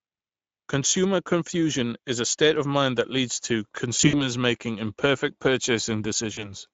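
Throughout, the speech carries plainly audible Speex codec damage: a hoarse, noisy grain, consistent with a bitrate near 17 kbps. On a spectrogram, harmonics look smeared and grainy, with fuzzy energy between them instead of clean bands.

From 3.97 to 4.21 s, VoIP packet loss concealed by the speech codec breaks the flow. About 100 ms of audio is lost, scattered over 160 ms, and the longest gap is about 60 ms. The decoder fills the holes by stretching its last pitch and filter into a buzzy tone or coloured noise that fades, and the speech stays weak briefly after audio returns. The waveform shows a decaying envelope, and the spectrogram shows frozen, flat harmonics. A shorter dropout of about 40 ms between 6.33 and 6.54 s gives the same brief fade.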